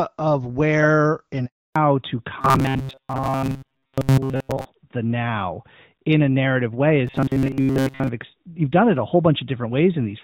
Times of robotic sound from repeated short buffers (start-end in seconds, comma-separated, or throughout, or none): 2.41-4.65, 7.07-8.09